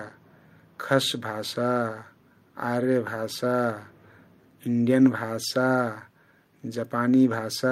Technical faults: none

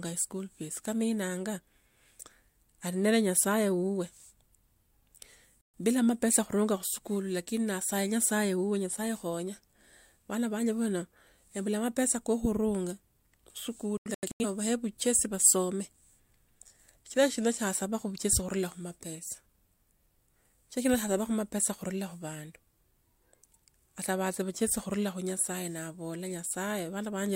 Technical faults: digital broadcast dropout

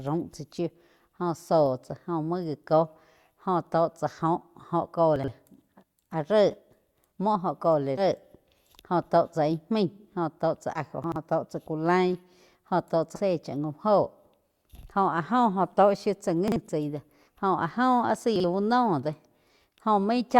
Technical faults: chunks out of order; compressed frames skipped

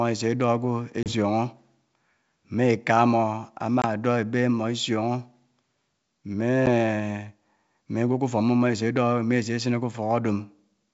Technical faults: packet loss on an ADPCM call

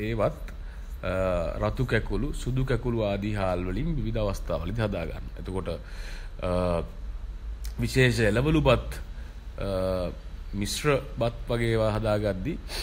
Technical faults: none

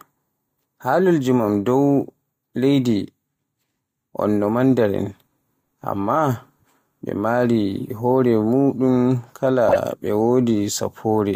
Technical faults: corrupt frame decoded

